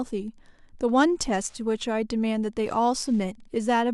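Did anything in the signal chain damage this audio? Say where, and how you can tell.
Yes. Wi-Fi interference enters the analogue wiring: faint ticking runs throughout, every 102.4 ms. A nearby radio's beacon is being rectified by the circuit.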